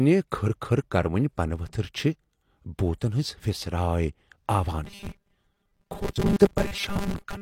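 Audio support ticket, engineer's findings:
Robotic sound from repeated short buffers, 4.85 s to end of clip. Rigid metallic buzz at 200 Hz; speech follows only roughly. Likely cause: audio arriving too seldom, with the last 5 ms, which fits a period of 1/200 Hz, repeated to fill gaps while real audio is skipped, about half the material. Fixed buzz rate, unlike codec warble.

Pre-echo, 6.36 to 6.40 s, 33 ms spread, and 6.56 s, 12 ms spread. Short hiss just ahead of sharp attacks, attacks soft and smeared. Transform codec block: quantisation noise sized for the loud attack spreads across the quiet moment before it. Noise sits before the onset, not after it like an echo, and is brief, unlike the continuous buzz around it.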